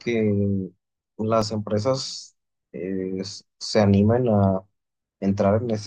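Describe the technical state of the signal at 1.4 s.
At 1.42 s the output buffer ran dry, an underrun with held sample. The converter froze its last value for 1.33 ms, flattening the speech.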